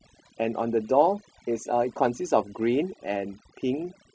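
A short speech recording carries overdone noise removal from start to finish. A noise reduction stage set far too aggressively has pushed individual frequency bands down to almost nothing wherever they sat close to its noise estimate, taking the softer parts of the voice with them. Between phrases the background collapses into near silence scattered with twinkling specks. Unlike a noise gate, which shuts everything at once, the damage here is band by band, so the artefacts flicker rather than switch.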